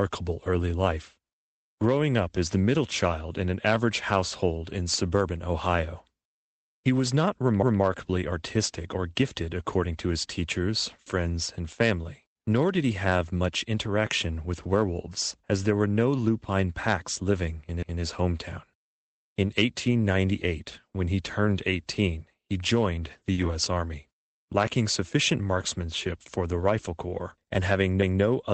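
Lost packet rebuilt from error correction at 14.63 s: a 20 ms stretch was replaced by the low-bitrate backup copy carried in the next packet, so nothing drops out, but the audio turns briefly rougher and noisier.

Overlapping chunks from 17.83 to 18.03 s, right after "lupine packs living in": the audio appears to be handled in 10 s blocks, and each new block begins before the last has finished, so about 200 ms plays twice, heard as a stutter at the join.

Lost packet rebuilt from error correction again at 18.17 s: another 20 ms rebuilt from the redundant copy, a momentary grainy patch with no gap.

Short concealed packet loss from 23.33 to 23.39 s, after "he joined the": 40 ms never arrived, so the decoder extended the preceding sound and blended back, giving a brief smear or wobble.

Lost packet rebuilt from error correction overlapping that, from 23.37 to 23.51 s: about 80 ms was reconstructed from backup data, which fits four separate lost packets. 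It comes through as a longer rough, noisy stretch.

Overlapping chunks from 28.03 to 28.23 s: the next block join, 10 s after the first, replays about 200 ms and produces the same stutter near the end.

Throughout, the Opus call path at 24 kbps limits the audio to about 8 kHz.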